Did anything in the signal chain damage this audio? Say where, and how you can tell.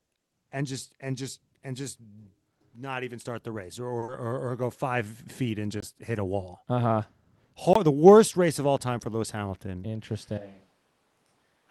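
Yes. Short stall from a late packet at 3.99–4.04 s, just after "start the race or": the network delivered a packet late, the jitter buffer ran dry, and the receiver held the last sound for about 30 ms before resuming. Nothing is lost, but the sound drags.

Short concealed packet loss at 4.04–4.10 s, immediately after the stall: about 40 ms of audio never reached the decoder, so the receiver extrapolated from the preceding sound and crossfaded back. This is a network fault. It is heard as a brief smear where real audio is missing.

Block of digital silence at 5.80–5.82 s and 7.73–7.76 s, the second just before "the worst race of": each is a 21 ms hole that drops abruptly to silence and back. This is a driver or buffer underrun, consistent with a 1024-sample buffer.

Jitter buffer speed-up at 8.99–9.23 s, after "race of all time": the buffer had accumulated excess delay and drained it by cutting whole pitch periods, about 40 ms in total. 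The audio plays roughly 12% faster at unchanged pitch, so it sounds hurried.

Switch to a distant microphone from 10.38 s to the end: the sound abruptly becomes roomy and thin, about 10 dB quieter, with room noise around 35 dB below the speech. The likely cause is at the capture stage, where the close microphone dropped out and a farther one took over.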